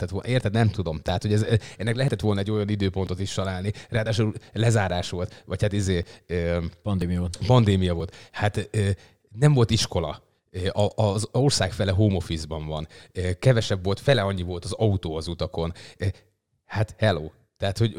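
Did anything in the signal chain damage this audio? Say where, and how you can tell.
Yes, there's an overlap between stream segments at the streaming or playback stage. You get tiny skips in the speech at 1.09 s (just before "hogy ez ennek"), 2.08, 3.07 (between "volna egy olyan" and "is találni"), 4.06, 6.03 (right after "volt vagy hát izé"), 7.02 and 8.00 s. They land about a second apart, which fits 1-second segments. At each joint the player trims 5 to 14 milliseconds it wrongly treats as duplicated, so the waveform jumps.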